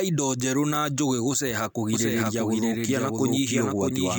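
The speech was likely captured a second time through a slower path and mixed back in. The result is a doubled audio track from 1.93 s, just after "theru na njũgĩ gũceha", to the end. A dry, full-band copy trails roughly 0.7 s behind at about equal loudness, cutting in abruptly.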